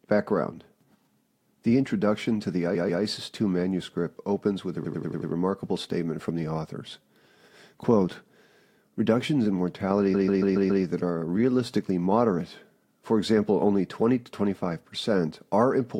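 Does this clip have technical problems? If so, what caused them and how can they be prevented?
Yes. Speech stutters from repeated frames at 2.74–3.02 s, where a 139 ms block plays twice more; at 4.84–5.30 s, where a 93 ms block returns five extra times; and at 10.13–10.83 s, where a 139 ms block repeats five times. This fits runs of four to six compressed frames being resent. This adds about 1.44 s. A waveform shows identical tiling, and a spectrogram shows copied blocks. Checking frame sequence numbers and discarding duplicates prevents this.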